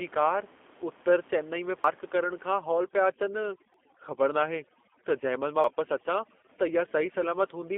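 A speech recording carried over a G.729 codec line at 8 kbit/s for its whole length. The sound is confined to roughly 250 Hz to 3.5 kHz, with nothing above 4 kHz, and the codec damage is plainly audible. The voice has the rough, slightly synthetic texture of a coder that rebuilds each short frame from a vocal tract model, a pitch predictor and a handful of pulses rather than sending the waveform itself. At 1.84 s, 3.74 s and 5.64 s the audio skips abruptly, with about a tenth of a second gone each time and the two sides butted together with no silence. The even spacing points to audio missing between chunks, likely a recorder or processor dropping a short piece each time it hands over from one chunk of about 2 s to the next. From 2.61 s to the end, overdone noise removal is at work. The room noise, which sits about 23 dB below the speech before this point, is pushed to near silence with twinkling specks. 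Frequency bands that dip close to the noise estimate are switched off, taking quieter parts of the voice with them.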